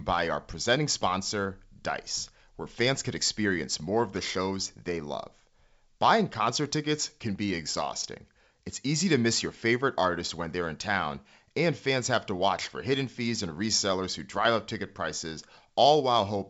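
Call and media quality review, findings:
No audible faults found.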